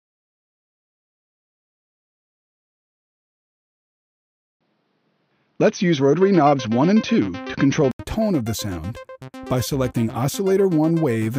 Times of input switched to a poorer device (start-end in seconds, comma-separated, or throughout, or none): 4.53-7.99